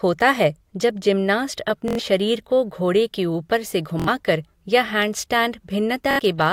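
Bluetooth stutter occurs at 1.88 to 1.99 s, 4.00 to 4.08 s, and 6.11 to 6.19 s. Packets were lost or late. The receiver replayed its last slice, making a brief buzz. Speech then jumps ahead by 93, 70 and 70 ms.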